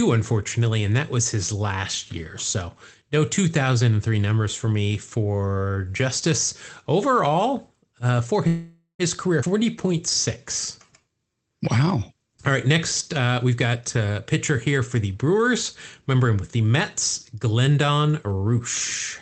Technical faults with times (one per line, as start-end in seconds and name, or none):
8.47-9.02 call audio freeze
9.41-9.45 skip ahead
9.59-9.95 jitter buffer slow-down
10.37-11.09 jitter buffer slow-down
13.45-14.02 jitter buffer speed-up
15.23-15.53 jitter buffer speed-up
16.15-16.70 jitter buffer speed-up
17.35-18.37 jitter buffer speed-up